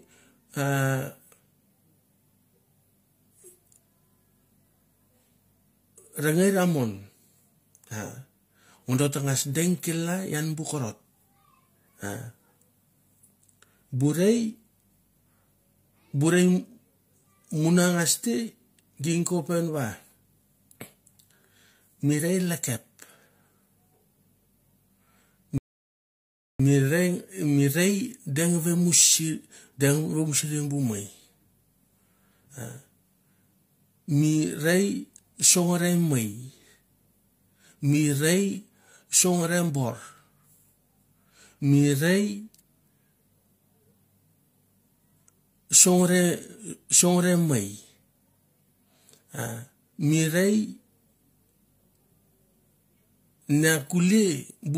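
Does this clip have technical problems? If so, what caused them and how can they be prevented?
Yes. A rebuffering stall from 25.58 to 26.60 s: the player's buffer emptied, so the speech halts in silence for about 1.0 s, then resumes exactly where it stopped. Building a larger playback buffer before starting, or adapting to a lower bitrate when throughput drops, prevents this.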